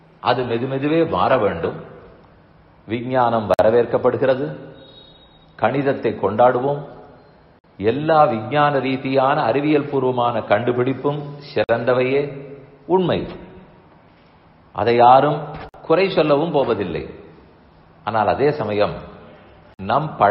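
For the first 2.0 s the treble sounds thin and partly synthetic, with stronger smearing, before quality jumps up with no break. That is an adaptive stream starting at a low bitrate, pointing to an HE-AAC rendition near 16 kbit/s giving way to AAC-LC near 96 kbit/s. A gap would interrupt the sound; this is a sudden step up in quality.

Short 50 ms silences then cut in at 3.54, 7.59, 11.64, 15.69 and 19.74 s, a gap between chunks every 4 s. Unlike dropouts or buffer underruns, no sound is lost. The audio simply pauses and resumes at a strictly regular spacing.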